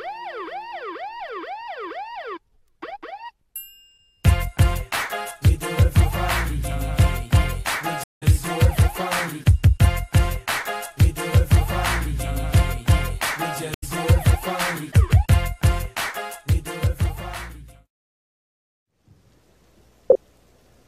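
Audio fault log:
8.04–8.23 s and 13.74–13.84 s, stream reconnect: the connection drops, leaving gaps of 180 ms and 80 ms. The player reconnects and starts a fresh decoder mid-stream, so the sound picks up slightly ahead, roughly 100 ms and 70 ms later, with a brief muted or faded first frame.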